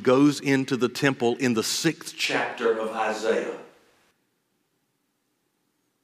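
From 2.26 to 4.11 s the speech suddenly turns roomy and hollow, with thinner bass and a faint background sitting well below it, while loudness barely shifts. That's likely a switch to a distant microphone, with the close mic's signal dropping out before it snaps back.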